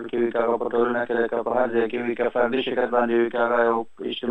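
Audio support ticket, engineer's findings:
Channel delay (doubling), throughout the clip. Every event is heard twice, the second copy about 43 ms late at equal level, like a slap echo. One channel runs a long buffer behind the other, which fits a 2048-sample buffer, and the mono sum exposes both copies.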